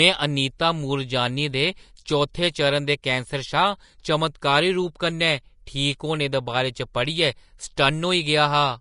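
Speech runs through the whole clip with plainly audible Vorbis compression damage. Nothing is present above 10.5 kHz. The treble sounds hissy and grainy, and consonant attacks are smeared. The likely cause is low-quality Vorbis encoding, which fits a bitrate near 37 kbps.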